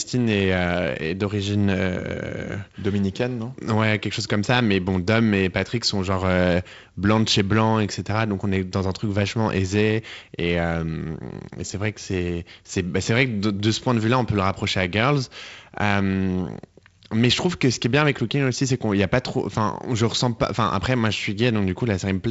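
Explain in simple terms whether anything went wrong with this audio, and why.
Nothing went wrong: the speech was carried over G.722 wideband telephone coding, which is why nothing sounds above 7.7 kHz and a faint hiss sits in the top band, exactly as that link is designed to sound.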